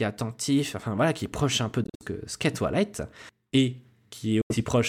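The speech cuts out abruptly twice: a broken, stuttering gap from 1.84 to 2.03 s, after "est proche un peu" and before "que qu'est", with silences up to 56 ms, then another from 4.41 to 4.60 s. This is likely a Bluetooth dropout, with late packets discarded and playback resuming further along.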